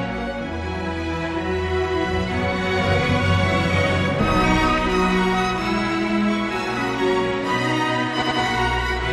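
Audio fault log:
8.18 to 8.36 s, repeated frames. A 92.9 ms block plays two extra times, so the sound stutters briefly. The decoder received the same compressed data more than once. Each block fits two compressed frames. The clip runs 185.8 ms longer.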